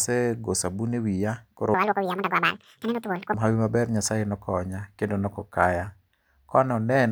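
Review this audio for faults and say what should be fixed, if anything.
From 1.74 to 3.34 s, a section at the wrong speed plays back at twice its recorded rate, likely from being clocked at the wrong rate during editing or playback. The speech there rushes by and jumps roughly ten semitones higher. Checking that every segment's sample rate matches the session clock before rendering prevents this.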